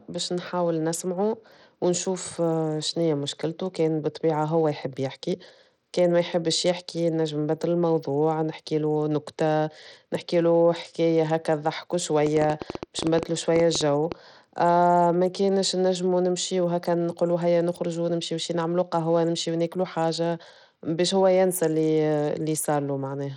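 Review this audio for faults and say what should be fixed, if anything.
The whole speech clip has gritty, coarse grain and a flickering top end, with nothing above 18.5 kHz. This is likely Bluetooth SBC compression, and the damage fits a low bitrate near 80 kbps. To prevent it, record over a wired link or use a higher SBC bit pool.

From 12.27 to 14.13 s there is a train of clicks: around twenty sharp ticks at an irregular 9.7 per second. They peak roughly 10 dB above the speech. A faulty connection or power supply, or nearby electrical interference, is the likely source. To prevent it, isolate the interface and cables from other equipment and check the audio connection.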